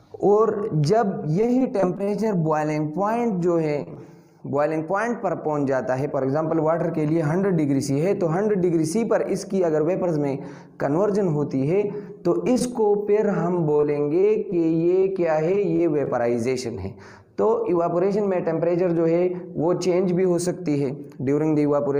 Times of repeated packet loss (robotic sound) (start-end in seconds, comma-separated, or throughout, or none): 1.31-2.37, 3.77-3.97